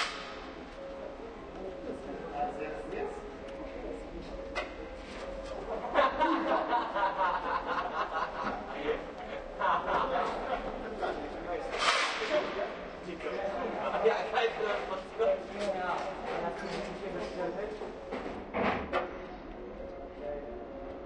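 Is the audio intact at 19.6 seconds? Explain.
No. From 18.36 s to the end at 21.06 s, de-emphasis has been applied wrongly: a treble-cut filter meant to reverse a high-frequency boost was run on audio that never had that boost, or was run a second time. It tilts the spectrum downward smoothly, leaving 10 kHz about 14 dB below 1 kHz. At 19.6 s the sound is therefore dull and muffled, with its brightness and crisp detail rolled away.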